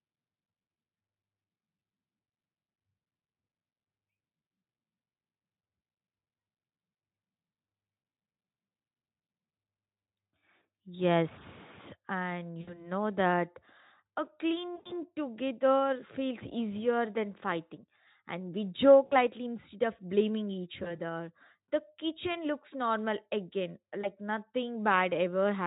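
At 4.45, 10.59, 12.61, 14.75, 19.05, 20.83 and 24.01 s the speech suffers VoIP packet loss concealed by the speech codec. Each time, the Speex decoder stretches its last pitch and filter into a buzzy tone or coloured noise that fades instead of going silent, which sets it apart from a plain dropout. The worst is between "that a" and "together feels easier than", with 120 ms of loss over about 0.3 s.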